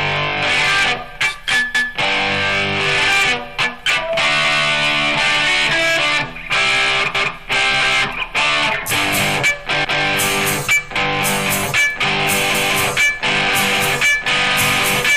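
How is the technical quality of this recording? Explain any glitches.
The technical quality is poor, with two faults. The level overdrives a stage by about 11 dB throughout, so around a tenth of the samples have their peaks cut flat. This hard clipping adds high harmonics, heard as fuzz on loud passages.

The audio was also processed in 2.5 s chunks that each start 200 ms before the previous one ended. At 1.75, 4.45, 7.15 and 9.85 s those overlapping chunks replay 200 ms, heard as a stutter.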